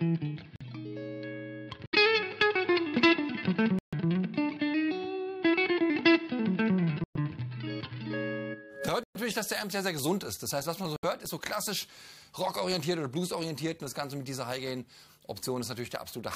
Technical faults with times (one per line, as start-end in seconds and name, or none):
0.56-0.62 corrupt frame muted
1.86-1.95 corrupt frame muted
3.79-3.94 corrupt frame muted
7.04-7.17 corrupt frame muted
9.03-9.16 corrupt frame muted
10.96-11.05 corrupt frame muted